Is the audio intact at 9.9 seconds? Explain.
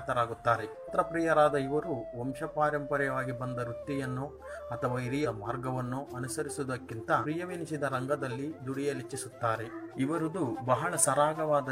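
No. From about 9.90 to 9.95 s there is damaged data in the compressed stream: a short run of bytes is wrong, so the decoder cannot parse the frames at that point, loses its place in the bitstream and has to hunt for the next valid frame header before normal decoding resumes. For roughly 50 ms this comes through as a brief chirp, squawk, click or short hole.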